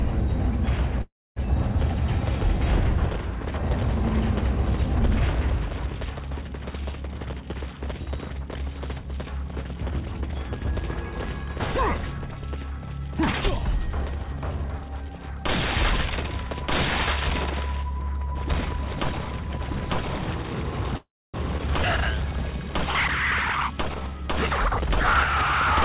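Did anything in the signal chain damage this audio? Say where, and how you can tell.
Yes. In the network and jitter-buffer stage, the call audio freezes at 1.02–1.38 s and 20.97–21.36 s. Each lasts about a third of a second, and a decaying fill gives way to roughly a quarter-second of silence before the sound resumes where it stopped. This is likely packets held up in transit that left the buffer empty.

The jitter buffer speed-up appears as four runs of time compression: 7.09–8.08 s at 114% speed, 13.41–14.85 s at 112%, 23.53–24.01 s at 110%, and 25.03–25.22 s at 123%. The receiver trimmed pitch-period slices, totalling about 150 ms, 200 ms, and 50 ms twice. The sound hurries without any pitch shift.

There is a skip ahead at 21.58–21.61 s, just after the second freeze. About 150 ms of audio is dropped and the two sides are butted together with only a 13 ms bridge. The audio was lost in transit or discarded by the buffer when it overflowed, while later audio was already waiting.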